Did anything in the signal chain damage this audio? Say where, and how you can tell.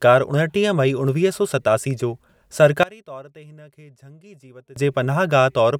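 Yes. From 2.83 s to 4.76 s the speech drops by about 24 dB and turns faint, as if the centre of the sound has been scooped out, then returns to full level. That's the signature of one channel inverted: with one side's polarity flipped, everything shared between left and right cancels when summed to mono. The likely culprit is the analogue wiring stage, such as a reversed balanced leg.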